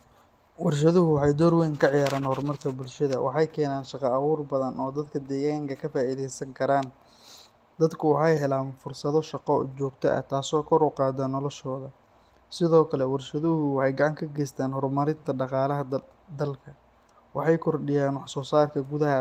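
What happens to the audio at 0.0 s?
Nothing goes wrong at 0.0 s: the speech starts cleanly, with no dropout, click or distortion at that moment.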